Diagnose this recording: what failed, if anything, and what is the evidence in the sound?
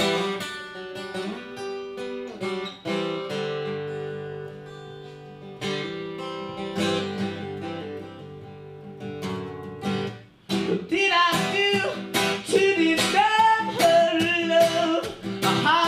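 No fault found in this recording.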